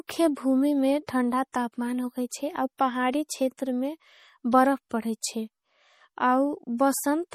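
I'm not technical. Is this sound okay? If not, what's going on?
No. All the way through, the speech has a watery, swirly quality with smeared edges. That points to likely MP3 compression squeezed hard. Unlike plain muffling, which only dulls the sound, this warbles, because faint details flicker in and out.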